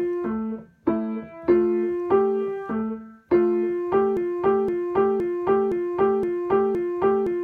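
Up to about 4.17 s the audio runs forward, and from there to the end it's stuck in a broken-record loop. A fragment of roughly 0.52 s plays back to back, identically, six times, so whatever should have come after 4.17 s never arrives. The most likely cause is the player, encoder or stream stalling and re-sending the last chunk it still had in its buffer, with nothing new coming through before the clip ends.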